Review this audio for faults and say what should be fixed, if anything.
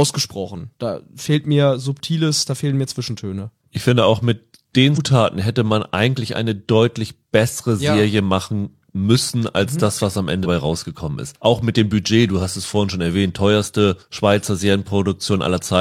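Compressed frames were skipped twice in this speech: the decoder dropped whole frames, either missing from the stream or rejected as corrupt, so playback leaps forward. At about 4.93 to 4.98 s, just before "hätte man eigentlich eine", roughly 200 ms of audio vanishes. At about 10.41 to 10.46 s, between "mhm das was am" and "rausgekommen ist", roughly 150 ms is lost. The jump sizes point to a few frames of about 46 ms each.

To prevent this, verify file integrity after transfer and use error-resilient transport or re-encode from the source rather than passing damaged streams to the decoder.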